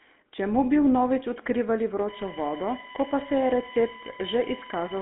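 Throughout, a GSM full-rate codec rebuilds the voice from a pulse-driven vocal-tract model, leaving it buzzy, gravelly and confined to 250 Hz to 3.5 kHz. From 2.08 s to the end, USB bus current leaks in through power or ground as USB whine, a fixed-pitch 1 kHz tone series peaking at 12 kHz and sitting about 15 dB below the speech.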